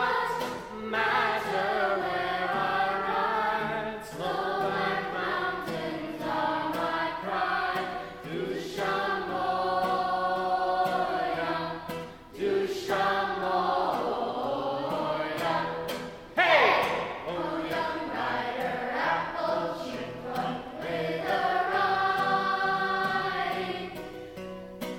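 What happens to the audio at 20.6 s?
Nothing goes wrong at 20.6 s; the audio plays through that moment intact, with no dropout, click or distortion.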